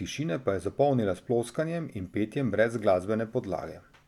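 Nothing in the speech stood out as a technical fault on listening.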